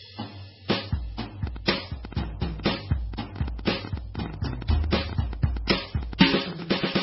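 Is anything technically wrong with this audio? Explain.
Yes, there are two faults in this music clip.

Transcoding between lossy codecs runs through the whole clip. The likely cause is that the music was encoded once at a very low bitrate, MP3 by its character, and then re-encoded to Vorbis at a similarly starved rate. Each stage adds its own smearing and warbling on top of the last. Nothing survives above 5.6 kHz, so the top end is dull and muffled, and the two kinds of artefact are heard layered together.

A train of clicks starts at 1.47 s and continues to 6.77 s. The clicks come at about 9 per second on an uneven pace, roughly fifty in all, each with much the same sharp shape and peaking around 10 dB above the music. This likely comes from interference from nearby equipment or a faulty connection or power supply injecting pulses into the signal. It is heard as irregular ticking that sits on top of the music throughout that stretch.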